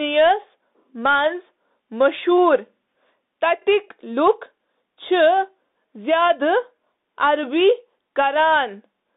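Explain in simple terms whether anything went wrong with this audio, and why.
Something did go wrong: the whole clip has been through a Bluetooth CVSD headset codec. It keeps only about 200 Hz to 3.7 kHz, so the speech sounds thin and boxy. The codec can't keep up with sharp sounds, so s sounds come out scratchy over a grainy hiss.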